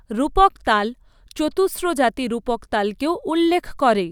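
No faults are audible anywhere in this speech recording.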